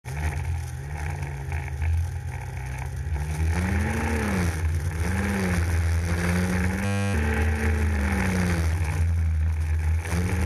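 A steady, mechanical buzz at 100 Hz replaces the sound from 6.85 to 7.14 s, about a third of a second in all. That is a system hang loop: the system froze while the audio hardware kept replaying the same 10 ms stretch of its ring buffer, many times over.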